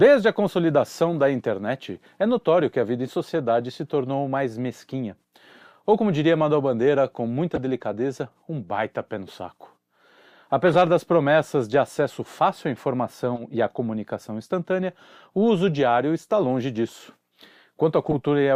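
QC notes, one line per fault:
3.63 s, 7.55–7.58 s, 10.67–10.76 s, 13.35–13.43 s, 18.06–18.15 s, corrupt frame decoded: brief chirps and noise bursts, faint after "que a vida em", strong after "com muita" and near the end; flipped bits in a few compressed frames throw energy to wrong frequencies for each damaged frame.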